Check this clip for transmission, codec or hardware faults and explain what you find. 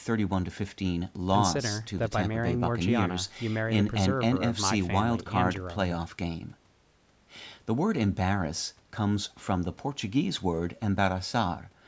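No transmission, codec or hardware faults.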